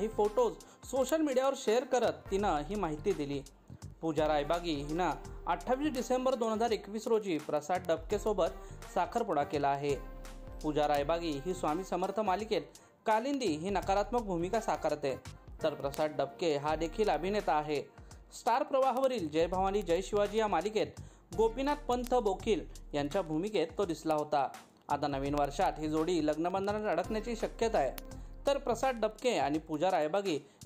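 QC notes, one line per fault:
0.11–30.66 s, word clock ticks: the receiving device runs on its own clock, a few hundred parts per million away from the sender's. About every 0.07 s the clocks slip one sample, which is dropped or repeated, leaving roughly 400 evenly spaced ticks.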